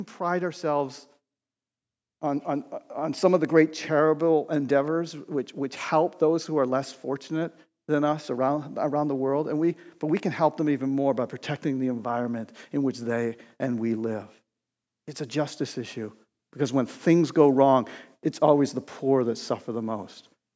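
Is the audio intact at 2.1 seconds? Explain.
No, automatic gain rising runs from 0.34 to 5.85 s, lifting speech and background together by about 5 dB; the waveform envelope and spectrogram brightness grow steadily.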